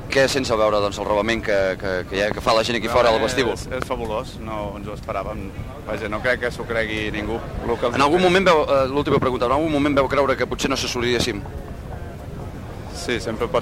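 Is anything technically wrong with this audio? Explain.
Yes, there are two loud pops, likely from a voltage spike such as a plug, switch or static discharge. A double pop sounds at 2.31 to 2.49 s and a single one at 3.82 to 3.84 s, each peaking roughly 15 dB above the sound, which continues underneath.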